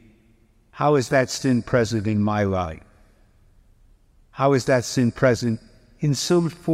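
No technical faults can be heard anywhere in this recording.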